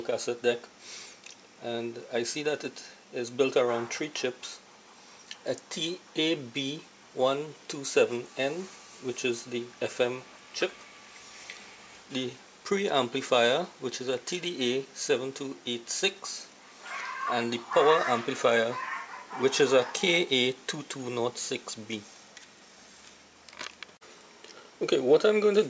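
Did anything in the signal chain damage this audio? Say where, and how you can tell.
No, nothing stood out on listening that would point to damage at any stage of the signal chain.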